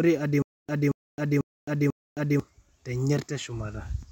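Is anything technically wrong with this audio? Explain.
Yes: from 0.42 to 2.40 s, stutter with silent gaps, likely a stalled stream replaying its last 228 ms fragment four times, each followed by 265 ms of dead silence.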